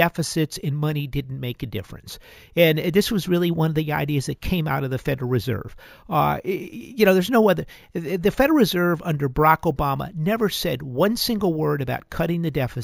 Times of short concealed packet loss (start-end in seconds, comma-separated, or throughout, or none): none